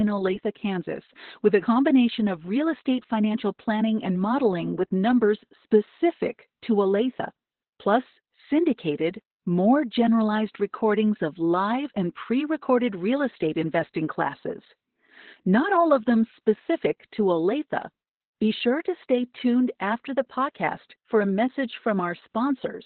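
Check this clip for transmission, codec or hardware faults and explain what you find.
The clip carries heavy Opus voice compression from start to finish. Nothing reaches above about 4.3 kHz, which marks the narrowband setting, and the damage points to a very low bitrate, around 8 kbps, in SILK mode. SILK models the speech as a predictive filter fed by an excitation signal, and at this rate that excitation is coded coarsely. The speech therefore sounds muffled, hoarse and faintly robotic. A plain low-pass filter would dull the sound the same way but leave it smooth, without that grainy, synthetic texture.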